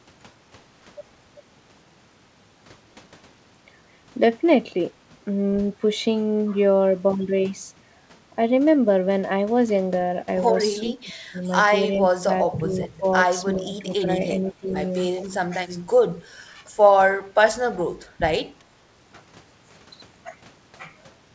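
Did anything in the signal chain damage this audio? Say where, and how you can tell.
Yes. In the call processing, the echo canceller likely failed during double talk, producing speech suppressed in double talk: 10.8–11.37 s (drops of up to about 25 dB), 12.07–14.68 s and 15.24–16.6 s (up to about 15 dB). Unable to separate near talker from loudspeaker echo, it ducked both, so the sound dips and breaks.

An echo leak occurs nearby at 11.43–11.48 s, 12.48–12.88 s and 15.19–15.23 s: a delayed copy arriving about 0.39 s late, roughly 40, 10 and 20 dB below the speech. Residual loudspeaker pickup likely escaped cancellation and was returned. The G.722 path has no content above 8 kHz.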